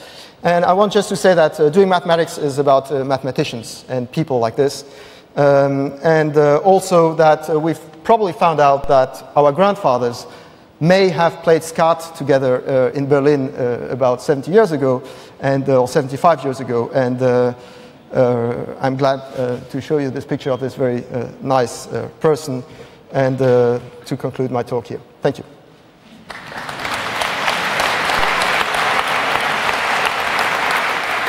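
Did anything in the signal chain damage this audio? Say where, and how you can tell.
Yes. There's a DC step at 8.84 s, most likely at the converter or analogue input stage. The zero line jumps by about -16 dBFS, giving a single low thump, then drifts back as a 2 Hz high-pass bleeds the offset away while the sound carries on.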